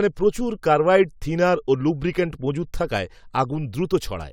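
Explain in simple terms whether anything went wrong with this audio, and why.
Listening to the speech, nothing stood out as having gone wrong.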